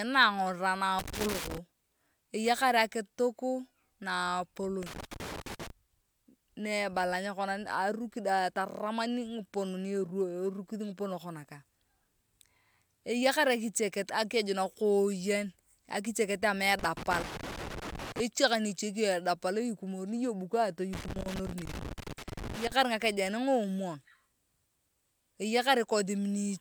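Irregular bursts of crackle and scratching break into the speech four times: from 0.99 to 1.58 s, 4.83 to 5.70 s, 16.79 to 18.20 s, and 20.93 to 22.72 s, the later bursts running longer. This is loose connector crackle. A worn or dirty contact in the signal path keeps making and breaking as it shifts, so the audio is chopped into fragments, and small steps in any DC on the line turn into scattered pops within each burst.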